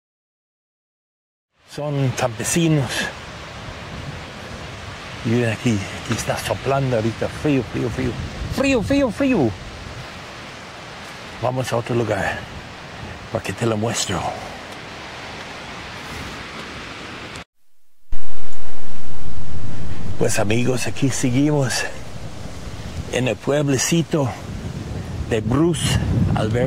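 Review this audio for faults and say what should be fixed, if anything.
Nothing here needs fixing: apart from a smooth fade-in from around 1.5 s that reaches full level at 2.3 s, the signal holds steady with no dropouts, clicks, distortion or level problems to correct.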